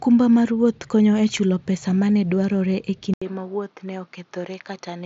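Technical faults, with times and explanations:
3.14 to 5.06 s, input switched to a poorer device: after an 80 ms gap the speech turns duller and clearly quieter, losing everything above 6.7 kHz, with a faint new background noise. This is likely a change to a narrower-band microphone mid-recording.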